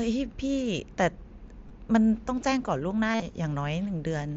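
Voice packets from the Bluetooth headset went missing twice, and the receiver covered each gap with concealed Bluetooth headset packet loss, filling it with recycled waveform from just before. At 1.68 s the gap is about 15 ms, consistent with two lost packets. From 3.12 to 3.22 s losses scatter across about 105 ms, the longest run about 52 ms, giving a held, buzzy tone that warbles as real mSBC wideband audio resumes.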